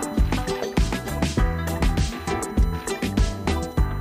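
USB whine runs throughout. Current drawn in 1 ms bus frames leaks into the audio as a 1 kHz tone, strongest at 4 kHz, roughly 30 dB below the signal.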